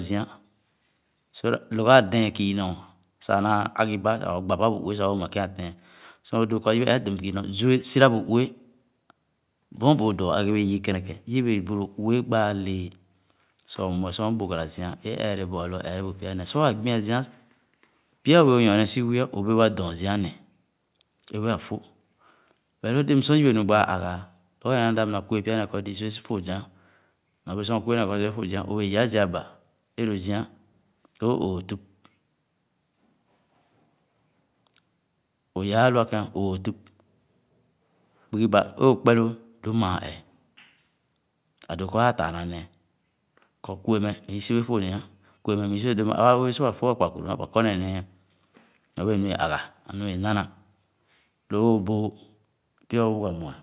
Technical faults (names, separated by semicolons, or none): none